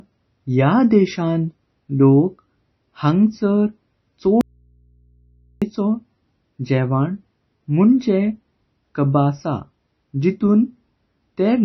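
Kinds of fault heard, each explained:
MP3 compression: The speech sounds watery and swirly throughout, with nothing above about 5.9 kHz and smeared attacks on consonants. This is likely heavy MP3 coding at a very low bitrate, around 24 kbps, cutting the treble and dropping weak frequency detail frame by frame.
Audio dropout to a faint residue: From 4.41 to 5.62 s the speech cuts out abruptly for about 1.2 s, leaving only mains hum roughly 40 dB below the speech. The likely cause is a break in the signal while the path after it stayed live.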